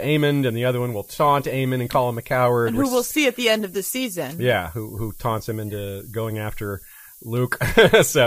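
Speech with low bit depth and noise shaping throughout: an 8-bit signal leaves a thin hiss about 20 dB down, pushed up so it climbs steeply toward the top end.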